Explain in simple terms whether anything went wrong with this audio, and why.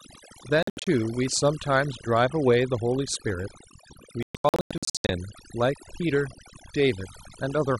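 Overdone noise removal runs through the whole clip. A noise reduction tool was set too strong, so it shut off sound that resembled the background hiss along with the quieter parts of the voice. The gaps hold near silence with faint twinkling specks.

Digital broadcast dropouts occur from 0.63 to 0.87 s and from 4.23 to 5.10 s. The receiver lost or rejected damaged chunks of signal and muted until good ones returned. The sound breaks into several short holes, up to 72 ms in the first stretch and 120 ms in the second, and the missing sound is gone.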